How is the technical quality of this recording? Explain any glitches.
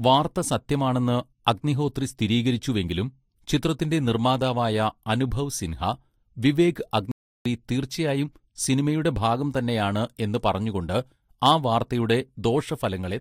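The speech has one glitch, a playback stall from 7.12 to 7.45 s. The sound cuts out in mid-flow and the output stays silent for about 0.34 s before it carries on. The likely cause is the player running out of data or having its thread blocked, so nothing reached the output until it recovered. A natural pause in speech tails off, but this silence starts abruptly, and it lasts far longer than the few-millisecond gap of a single lost packet.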